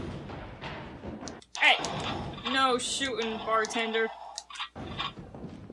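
Nothing stood out as a technical problem on listening to the clip.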